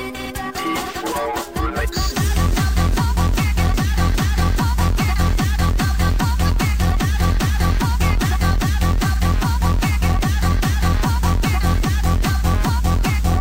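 Nothing in the audio stood out as a technical fault on listening.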